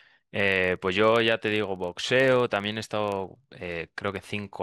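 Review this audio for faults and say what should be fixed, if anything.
A filter restarted on every block is the fault here. The filtering stage discards its internal state at each block boundary and begins every block as though the input before it had been silence. Each block therefore opens with a small transient, and across the whole speech clip these stack into a steady 25 Hz buzz. That rate fits blocks about 40 ms long. The buzz rises and falls with the speech level, loudest on strong passages. To prevent this, keep the filter's state in memory and carry it from each block into the next instead of resetting it.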